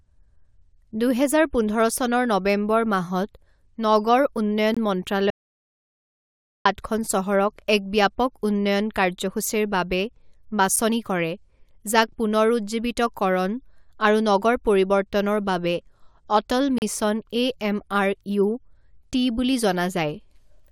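At 4.74 to 4.77 s the speech is cut by a hard-edged hole of about 22 ms, a gap between stream segments. Two consecutive segments were stamped with a small space between them, and the player filled that space with silence. Nothing is lost, but the flow stops abruptly. The same seam returns every 6 s, which fits 6-second segments: a brief 7 ms break at 10.76 s, then a longer 36 ms hole at 16.78 to 16.82 s.

Between 5.30 and 6.65 s the speech drops out completely for about 1.35 s. This is an audio dropout to silence. The gap is silence with no room tone, and the speech that should fill it is gone. It cuts off and resumes mid-flow. The likely cause is a momentary loss of the input, such as a link failure, disconnection or mute, while recording continued to write silence.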